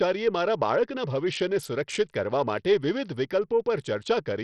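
Throughout the speech, the audio appears to have passed through a starved Bluetooth link, likely Bluetooth SBC compression running with a small bit pool, which fits a rate of about 64 kbps. With so few bits, the upper sub-bands are left nearly empty and the rest are coarsely quantised. Nothing survives above 14.5 kHz, the remaining treble flickers in and out, and a heavy gritty, aliased roughness rides on every syllable.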